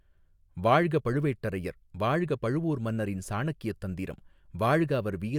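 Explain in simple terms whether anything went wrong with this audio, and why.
Nothing went wrong with this speech recording: the signal stays steady and intact the whole way, with no breaks, glitches or distortion to be heard.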